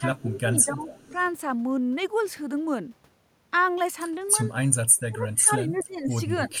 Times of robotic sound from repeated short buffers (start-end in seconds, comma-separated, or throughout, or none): none